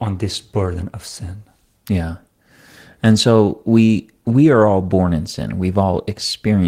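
No technical faults can be heard anywhere in the speech recording; the signal stays continuous throughout.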